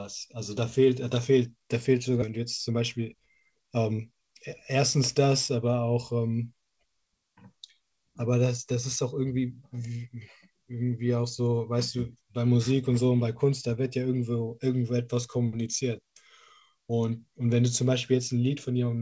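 At 2.22 s the speech makes a skip ahead: about a second of audio is simply gone, and the sound on either side is butted together with no silence filling the join. That seamless jump is what separates it from a dropout, which would leave an audible hole. Here the receiver discarded a backlog of queued audio at once, which points to the playout delay shrinking by roughly a second in one step.

From 2.32 to 4.20 s comes a jitter buffer speed-up. The speech runs about 8% fast while its pitch stays put, because the receiver repeatedly snipped out pitch-period-sized pieces, roughly 0.15 s in total, to drain excess buffered audio gradually. Unchanged pitch distinguishes this from resampling or a clock mismatch, which would raise pitch along with tempo. The effect is a brief, slightly hurried delivery rather than a jump, all carried over a G.722 call path at 64 kbps, with nothing above 8 kHz.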